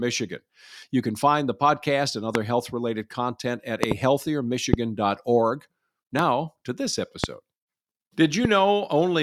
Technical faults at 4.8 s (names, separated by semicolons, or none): loud pop